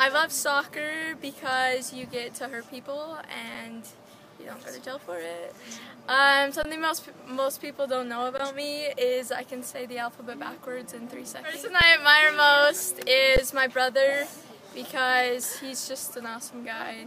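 At 6.63, 8.38, 11.81 and 13.37 s, an underrun with held sample occurs. The output buffer ran dry, and the converter held its last value. The sound freezes flat for 17.4, 17.4, 3.5 and 13.4 ms. Nothing is lost, so each resumes softly.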